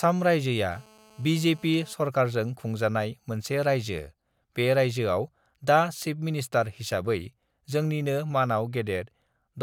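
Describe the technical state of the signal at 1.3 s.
A steady, raspy 217 Hz buzz sits about 28 dB under the speech from 0.72 to 1.93 s. It is GSM phone buzz: a nearby phone's call bursts, rectified by the audio circuit.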